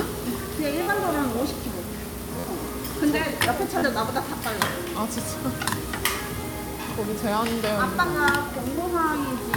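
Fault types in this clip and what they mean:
Repeated buffer: When fresh audio failed to arrive in time, the player replayed its last block of about 11.6 ms, which fits a 512-sample buffer, two to four extra times. That happens four times here, briefly cutting the sound with a rapid buzz or stutter lasting up to about 50 ms. Unlike a dropout, the gap is filled rather than silent, and the same fragment repeats with a hard join at each pass.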